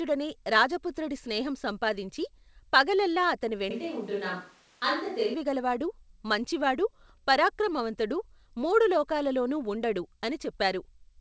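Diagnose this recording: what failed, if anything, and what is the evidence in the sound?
At the capture stage, the close microphone's feed likely dropped out and a distant microphone took over from 3.71 s to 5.34 s, just after "రాజపుత్రుడి స్నేహం సంపాదించి పగలల్లా". The switch to a distant microphone is abrupt in both directions: the speech turns roomy and hollow, loses low end, and falls about 5 dB in level. A bed of room noise about 30 dB below the speech rises underneath, since the far microphone picks up more of the space relative to the talker. Throughout, the audio stops at 8 kHz, consistent with the G.722 call codec.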